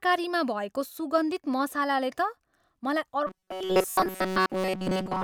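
Robotic sound from repeated short buffers begins at 3.27 s and lasts to the end of the speech. Audio likely arrived too seldom, so a fragment of about 5.3 ms was repeated over most of the stretch, imposing a rigid metallic buzz at 188 Hz.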